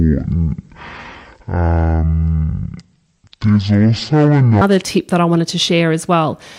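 From the start to 4.61 s the speech plays at 0.51x, dropping roughly ten semitones and dragging, likely a section at the wrong speed from a mismatched clock, until "tip that I wanted".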